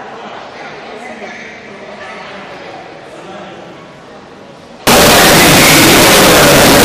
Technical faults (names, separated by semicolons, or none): signed and unsigned mixed up